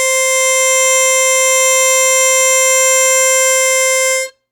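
Nothing to flag in this bit of music; there are no technical faults to point to anywhere in it.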